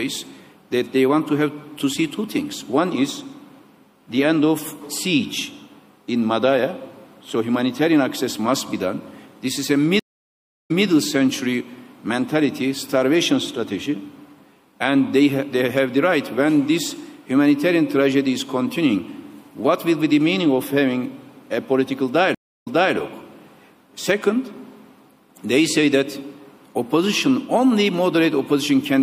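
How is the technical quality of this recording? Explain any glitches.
Technical quality is poor: plainly audible codec damage throughout and two stream reconnects.

Across the whole recording there is plainly audible MP3 compression, likely from an encode around 64 kbps. The encoder starves the upper band, cutting treble and letting weak frequency lines flicker between frames, so the sound turns watery and swirly, with smeared attacks and metallic chirps on sibilant detail.

A stream reconnect occurs from 9.99 to 10.85 s, with 700 ms of silence, and another from 22.35 to 22.95 s, with 315 ms of silence. Each time the connection dropped and a fresh decoder restarted mid-stream, with the server resending earlier data. The audio therefore resumes 157 ms and 287 ms earlier respectively, repeating a short stretch.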